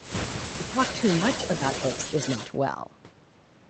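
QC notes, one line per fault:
0.00–0.07 s and 0.79–2.53 s, echo leak: a delayed copy of the speech trails it by 250 ms. It is faint at the very start and much stronger through the longer stretch. The far end's echo canceller likely failed to remove its loudspeaker pickup and sent it back.
0.51–0.77 s and 1.58–1.62 s, speech suppressed in double talk: the talker's level dips while the other side speaks. The first dip is deep, the second only slight. The echo canceller likely could not tell the talker from echo and turned both down.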